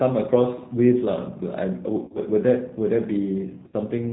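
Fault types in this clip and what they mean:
G.729 codec: rough, synthetic-sounding speech with nothing above 4 kHz, rebuilt from a filter and pulses. That points to 8 kbit/s coding, not simple band-limiting.
VoIP packet loss concealed by the speech codec: near 2.04–2.20 s and 3.68–3.74 s, sound smears into a fading buzz or coloured noise instead of dropping to silence, then recovers sluggishly.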